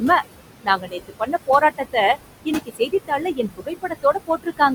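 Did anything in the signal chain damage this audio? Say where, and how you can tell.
Yes. The call-processing stage shows noise suppressor artifacts throughout. The room noise drops by about 20 dB between phrases.

There is also speech cut by the noise suppressor, from 0.64 to 1.96 s and from 2.45 to 4.6 s. Quiet syllables dip by about 18 and 19 dB, sounding swallowed.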